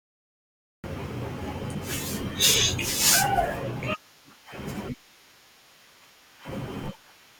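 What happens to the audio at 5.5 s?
Nothing goes wrong at 5.5 s; the speech runs through that moment intact, with no dropout, click, glitch or change in level or tone.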